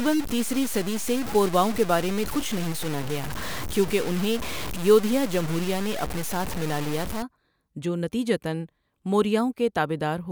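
From 0 to 7.22 s, the speech was likely cut to very few bits and truncated without dither, at a level that points to about 5 bits: low bit depth without dither. Error noise sits roughly 10 dB below the speech and tracks it, leaving quiet syllables gritty and grainy.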